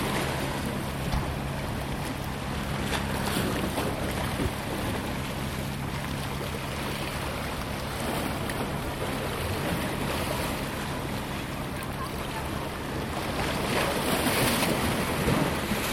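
Four sharp, isolated clicks cut through the sound at 5.68, 7.74, 10.91 and 13.82 seconds, each a single instant with no gap or dropout around it. These are most likely dropped samples: about 0.7 ms of audio goes missing each time, so the waveform jumps straight from one value to a later one. That step is far too brief to remove anything audible, but the discontinuity itself registers as a click, a thin vertical line across the spectrum.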